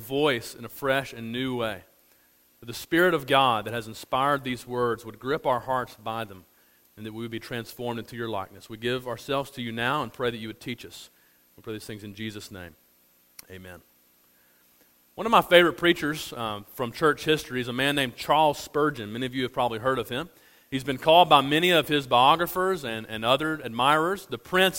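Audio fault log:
No faults heard.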